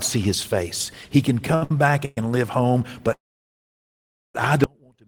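From 1.52 to 2.18 s the speech shows repeated stalls (stutter): four short gaps, the longest 116 ms, totalling 254 ms and covering 39% of that span. Late packets drained the jitter buffer each time, so the last sound was stretched, and the speech drags without losing anything.

At 3.13 s a call audio freeze begins, lasting until 4.35 s. The held sound decays into about 1.16 s of silence before speech resumes where it stopped, adding roughly 1.22 s of delay with nothing missing. The likely cause is packets held up in transit, emptying the jitter buffer.

At 4.64 s the speech cuts out abruptly in an audio dropout to a faint residue that runs to the end. Only a faint sound remains, roughly 35 dB below the normal level, which likely means the signal was lost while the downstream path stayed live.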